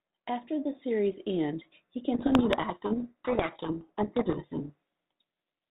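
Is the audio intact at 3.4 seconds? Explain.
No. At 3.4 seconds you're in the middle of a codec payload misread running from 2.14 to 5.24 s, right after "the series' end he". The decoder takes each G.726 code word with its bits in the wrong order, so the 32 kbit/s speech gets buried in harsh distortion.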